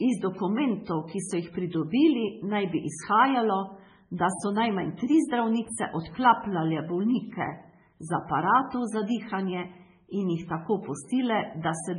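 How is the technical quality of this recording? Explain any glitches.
Pretty rough, honestly. All the way through, the speech sounds watery and swirly with nothing above 10.5 kHz, likely heavy MP3 compression at a very low bitrate, around 16 kbps: treble gets cut and weak details flicker between frames.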